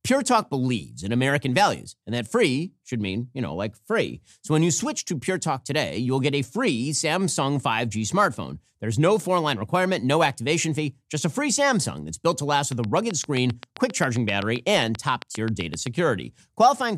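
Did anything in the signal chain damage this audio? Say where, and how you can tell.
Yes: a train of clicks, likely from interference or a faulty connection. From 12.72 to 15.88 s, after "that's built to last", roughly thirty same-shaped pulses tick at a regular 7.6 per second, peaking about 10 dB above the speech and persisting through pauses.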